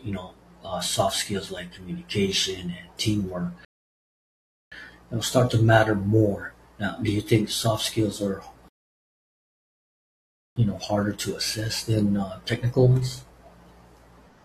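At 3.65 s the speech drops into dead silence until 4.72 s, then picks up exactly where it left off, with nothing skipped. The same happens again from 8.68 s to 10.56 s, a longer gap. Each pause is a rebuffering stall: the player used up its downloaded audio and waited for more to arrive. No sound is lost, but the stalls add 1.07 s and 1.88 s to the running time.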